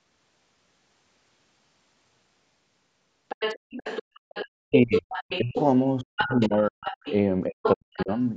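From 3.29 to 4.48 s, the other side's voice leaks through. A second voice sits about 10 dB under the speech. This is likely loudspeaker echo the canceller missed. It returns at 4.95 to 5.61 s, 6.16 to 7.14 s and 7.63 to 8.26 s, sometimes only about 5 dB down.

Speech is suppressed in double talk at 4.59 to 5.07 s, 5.4 to 5.57 s, 6.02 to 6.94 s and 7.47 to 8.1 s. Each time, the talker's voice dips by roughly 30 to 40 dB or cuts out while the other voice plays. The likely cause is the canceller turning down both voices at once.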